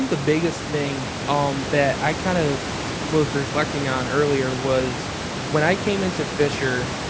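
Nothing technically wrong can be heard in this speech recording. It has passed through a call's microphone processing, which leaves nothing above about 8 kHz, and the room's background noise sits about 9 dB below the speech.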